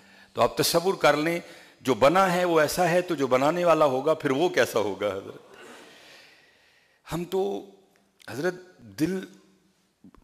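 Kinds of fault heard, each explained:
CD scratch ticks: A scratch on the disc wipes out more data than error correction can rebuild. This happens once per revolution. The player then patches or mutes the damaged samples. Here that produces a run of nine short ticks between 7.60 and 9.55 seconds. They arrive at a steady rate of roughly four to five per second. Each is brief, the longest lasting only a few milliseconds.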